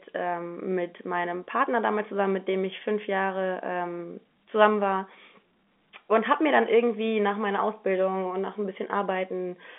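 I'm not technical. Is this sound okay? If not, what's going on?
Yes, nothing is wrong here.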